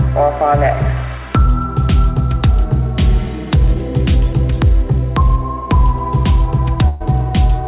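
At 6.88 s the sound briefly freezes into a held, fading tone, buzz-like if it was voiced or hiss-like if not, for about 120 ms until 7.02 s, and then jumps ahead with that stretch of audio gone. This is a burst of packet loss. Several packets in a row never arrived in time, so the receiver stretched the last good sound and faded it rather than go silent. The audio is band-limited to 4 kHz, which fits a 64 kbps G.711 mu-law call path.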